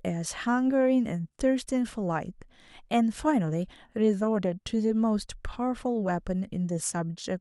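No technical faults can be heard anywhere in this speech recording. Nothing in the audio points to a problem in how it was captured, processed or delivered.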